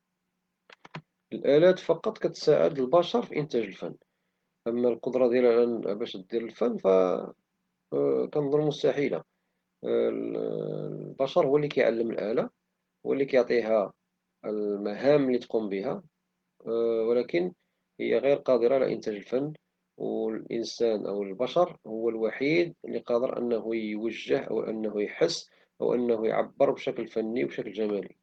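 Nothing in this speech recording stood out as a technical problem on listening.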